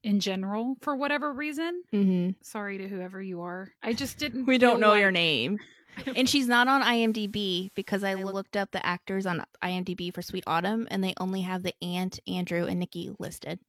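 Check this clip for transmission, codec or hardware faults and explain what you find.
One transmission fault: digital radio blending to analogue, from 5.95 to 8.46 s, between "know like your name" and "up the actors on". The receiver lost the digital stream and cross-faded over about 0.36 s to the station's FM broadcast, then faded back. During that stretch a faint hiss rises, roughly 30 dB below the speech. The level stays matched through both blends.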